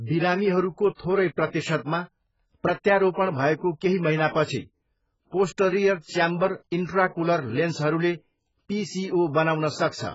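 Throughout the speech, heavy AAC compression, likely AAC-LC at a very low bitrate that fits about 12 kbps, has left the encoder short of bits. Nothing remains above 7.6 kHz, so the sound is dull and smeared, with a fizzy, warbling texture on sibilants.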